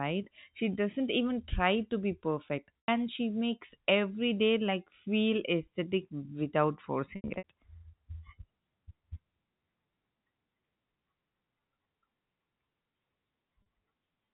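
Packet loss with pitch repetition hits the speech three times, each gap bridged by looping the last pitch period. At 2.79 to 2.88 s, about 100 ms is lost and the sound briefly holds on a buzzy sustained tone. At 7.16 to 7.44 s, 180 ms of loss is scattered over 280 ms, with the longest run 80 ms, so the sound stutters through several held, buzzy patches. At 13.62 to 13.66 s, a 40 ms loss leaves only a faint catch in the G.711 telephone-band audio.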